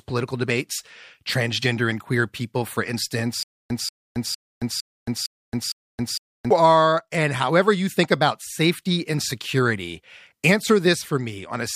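From 3.43 to 6.51 s the speech breaks into a stutter with silent gaps. A 186 ms fragment repeats six times, each followed by about 272 ms of dead silence, every 458 ms. The stream likely stalled and replayed its last buffer. Audio resumes at "are and however you".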